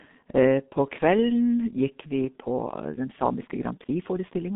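From the start, the speech is squeezed through a G.723.1 codec. Nothing above 4 kHz survives, and the line band runs from 150 Hz to 3.7 kHz. Heavy coding damage leaves it muffled and hoarse, with blurred consonants, which fits a bitrate near 6 kbit/s.

At 2.36 s the pace jumps and stays fast to the end. The pitch does not rise. The delivery turns rushed, running about 1.36 times faster. This is likely a time-stretched section, squeezed by dropping short pieces.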